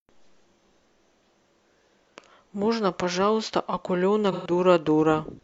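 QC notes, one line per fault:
4.32–4.51 s, AAC frame loss with concealment: a 128 ms smeared, phasey patch where the decoder rebuilt what sounds like three missing frames from the last good spectrum.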